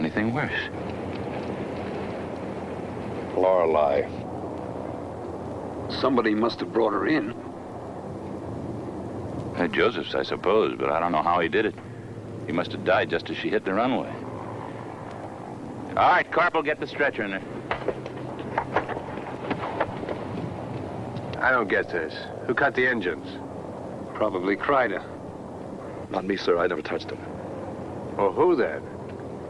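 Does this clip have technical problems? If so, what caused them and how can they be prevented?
No, there are no technical problems to report here.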